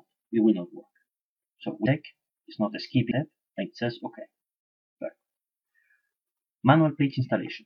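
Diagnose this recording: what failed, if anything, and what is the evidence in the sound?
Compressed frames were skipped at the codec stage, where the decoder lost or rejected whole frames. At 1.81–1.86 s and 3.07–3.12 s the sound jumps ahead, leaving out roughly 300 ms and 400 ms of material. Each join lasts about one 46.4 ms frame. Unlike a network dropout or buffer underrun, there is no inserted silence or repeated fill. The timeline simply closes up, so later sound arrives early.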